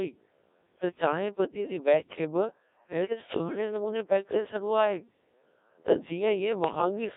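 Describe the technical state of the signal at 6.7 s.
At 6.7 s you're hearing the Codec 2 vocoder throughout: the voice is rebuilt from sine waves, so it's robotic and buzzy, squeezed into roughly 200 Hz to 3.7 kHz, consistent with a rate around 1.3 kbit/s. On top of that, bit errors on digital voice radio hit from 6.64 to 6.82 s. A few percent of flipped bits scramble the pitch, level and spectrum of a handful of frames, so the voice jumps and warbles into bleepy gibberish.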